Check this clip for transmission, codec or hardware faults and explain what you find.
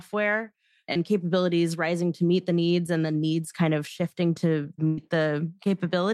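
Two network dropouts show up in this speech. From 0.93 to 0.97 s, just before "capabilities rising to meet", there's short concealed packet loss: about 20 ms arrived late, and the decoder patched it by extending the previous sound, leaving a quick smear. Then at 4.87 to 4.99 s, right after "kind of shifting to", a burst of packet loss drops roughly 100 ms. The receiver stretches and fades the last sound across the gap, so you hear a brief held buzz or hiss before the speech picks up further along.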